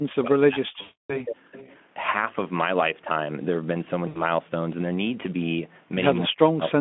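A speech recording carried over a call line, with three kinds of fault. From 0.01 to 1.57 s, and again from 6.27 s to the end at 6.80 s, the voice sinks and breaks up in pieces, falling by about 40 dB at its deepest. This is speech suppressed in double talk, most likely an echo canceller that could not tell the talker apart from the far side and turned everything down. On a waveform the envelope collapses to near-flat stretches; a spectrogram shows the harmonics fading or vanishing in blocks. Inside that first stretch, from 0.81 to 1.22 s, about 280 ms of audio is missing and filled in by the decoder: VoIP packet loss concealed by the speech codec. The last sound is stretched into a buzzy tone or a coloured noise that fades, and the voice stays weak briefly after real audio resumes. A shorter gap of 80 ms appears at 4.07 to 4.22 s. A spectrogram shows smeared, repeated harmonic bands or a featureless noise patch that darkens frame by frame. 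Between 1.58 and 1.81 s a faint delayed copy of the voice, trailing by 268 ms and about 25 dB below the speech, comes through as echo leak, likely from a loudspeaker whose canceller let some pickup slip back. On a spectrogram it appears as a pale, thin ghost of the preceding harmonic pattern, offset in time.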